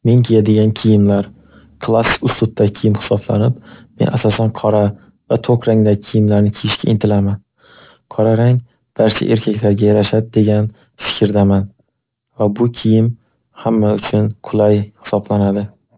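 Aliasing runs through the whole speech clip. Content above 4 kHz folds back down, which fits a drop to an 8 kHz rate with no low-pass filter first. Sibilants turn gritty and metallic, with the folded energy roughly 20 dB below the voice and pressing up to the band edge.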